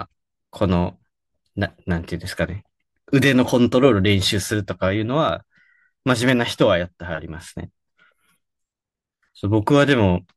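A speech recording with no technical faults to report. Nothing in it calls for a time or a cause.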